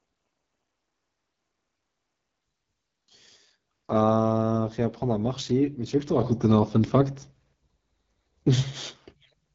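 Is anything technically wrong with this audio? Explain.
Yes, there are two problems. Throughout the clip, the speech passes through the AMR wideband (HD Voice) codec at a low bitrate. That codec models speech up to 6.4 kHz by driving a vocal tract filter with sparse pulses, and fills the band just above with shaped noise. At a low rate too few pulses describe each frame, so the speech comes out plainly rough and raspy, and nothing is present above about 7.6 kHz. The coarseness points to one of the codec's lowest modes, around 8.85 kbit/s.

At 6.21 s the microphone volume is stepped up. The call software judged the input too quiet and raised the device's input gain in a single jump of about 7 dB. Because the change happens at the microphone, the speech and the background noise both become louder at the same moment. The jump is abrupt rather than a gradual swell, so the last few seconds sit about 7 dB higher than everything before them.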